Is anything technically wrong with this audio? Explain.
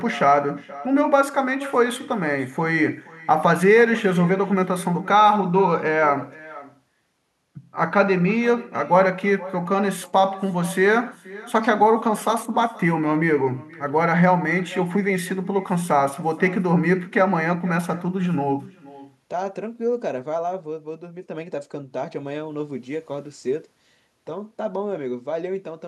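Yes. Echo with no canceller, throughout: the far end's loudspeaker feeds its microphone unremoved, so the speech returns about half a second later as a faint, thin copy, about 20 dB down.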